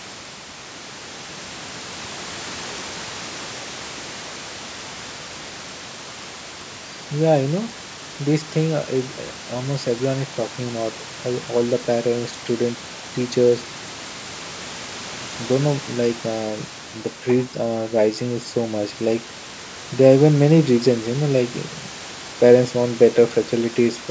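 Nothing stood out on listening to this speech recording, with the call microphone's usual low-end trimming and a low bed of room noise about 20 dB beneath the speech being the only things heard beyond the talking itself.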